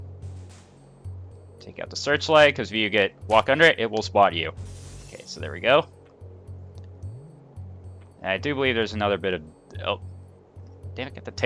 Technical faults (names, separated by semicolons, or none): none